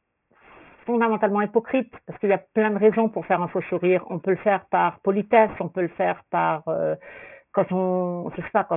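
Throughout the speech, sibilants turn gritty and metallic, with spectrum crowding the 3 kHz edge: aliasing, where unfiltered content folded back after downsampling, consistent with a 6 kHz rate.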